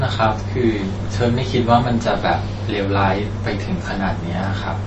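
MP3 compression runs throughout the speech, plainly audible: nothing is left above 7.9 kHz, and the remaining detail sounds watery and swirly, with smeared onsets. That is likely the encoder starving for bits, zeroing weak frequency lines that flicker between frames, which fits a rate near 32 kbps.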